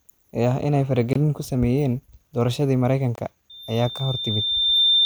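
At 1.13 to 1.16 s, right after "ee ah in ay" and just before "ku sameeyeen doorashadii", there's a gap between chunks: a 23 ms hole. It repeats at 3.16 to 3.18 s, after "ku sameeyeen doorashadii". The two-second spacing suggests the audio was handled in 2.0 s chunks, with silence slipped in at each join.

From 3.50 s to the end, a loudspeaker feedback squeal takes over. The mic is picking up its own speaker, and the loop runs away at 3.6 kHz. It swells over about a second and a half to roughly 5 dB above the speech.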